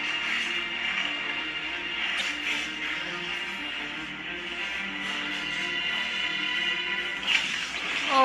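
At 2.16 to 2.21 s and again at 7.75 to 7.80 s, damaged data in the compressed stream makes the decoder misread frames and lose sync. Each event is a brief disruption, about 60 ms long, while the decoder searches for the next frame header.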